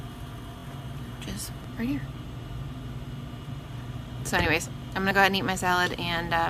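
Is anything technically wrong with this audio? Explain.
Yes, there are two kinds of fault.

From 0.58 to 0.63 s there are repeated frames. One 23.2 ms compressed frame plays two extra times, adding 46.4 ms. The same tiny slice of sound stutters.

At 1.64, 5.11 and 5.98 s the sound jumps ahead. These are likely dropped buffers from an overrun. Samples were overwritten before being read, so about 10, 20 and 10 ms of audio vanish and the edges butt together without any silence.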